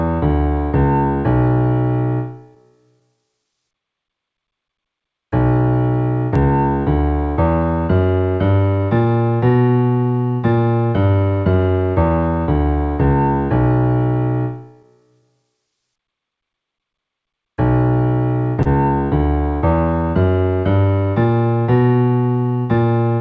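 The sound is carried over a call path whose band stops at 8 kHz, which fits a wideband codec such as G.722. Throughout the clip there is clock drift between sender and receiver. The sender's clock runs about 2 percent slow, so the receiver's jitter buffer keeps draining and the receiver has to pad the stream to avoid running dry. Because of this, the timing never quite settles. Small, unevenly spaced hiccups recur for the whole duration instead of appearing as one isolated glitch.

Those hiccups are repeated timing corrections, in two stretches. The first runs from 3.17 to 13.07 s and adds roughly 0.2 s in total. The second runs from 15.22 to 23.05 s and adds somewhat less, around 0.15 s. In both, playback moves at about 98 percent of the source rate. The corrections are all in the same direction, lengthening rather than cutting, and each is small. The result is a slightly unsteady tempo rather than obvious repeats.

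At 18.62 to 18.67 s there is a short stall from a late packet. One packet missed its playout deadline and the buffer ran empty. The receiver held the preceding sound for 31 ms until the packet arrived, then resumed from the same point with nothing lost. This is heard as a brief sustained smear, possibly with a slight buzz or dip, and it shifts the delay by 31 ms from there on.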